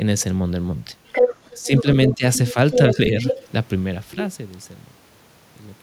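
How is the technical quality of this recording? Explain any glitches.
The recording has echo problems: a second voice bleeds in, and the main talker is briefly pushed down while both speak.

Other side's voice leaking through appears from 1.07 to 2.16 s at roughly the talker's own level, then in shorter, quieter scraps at 2.34 to 2.54 s (about 15 dB down) and at 2.71 to 2.94 s and 3.21 to 3.46 s (about 5 dB down). This is likely loudspeaker playback that the echo canceller failed to remove from the microphone.

Speech suppressed in double talk follows, with the main voice dipping by about 10 dB between 1.55 and 1.86 s and by about 15 dB between 2.09 and 2.23 s, each time for a fraction of a second. The likely cause is the echo canceller, unable to separate talker from echo, turning both down together.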